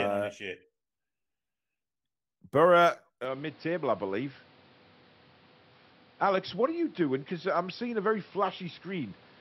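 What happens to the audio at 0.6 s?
Nothing goes wrong at 0.6 s; the speech there comes through intact, with no dropout, click, distortion or other fault.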